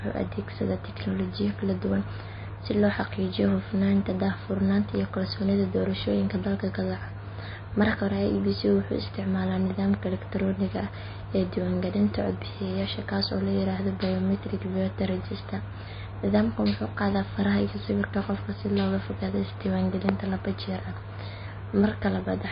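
Heavy MP3 compression at a low bitrate, around 26 kbps, has likely starved this speech recording of bits for its full length. The encoder has cut everything above 5 kHz, leaving it dull, while weak frequency lines flicker on and off between frames, giving a plainly audible watery, swirly texture.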